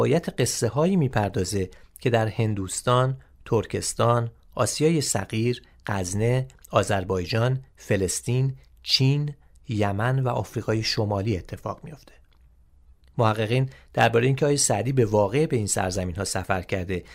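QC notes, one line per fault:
No technical faults were detected anywhere in the signal.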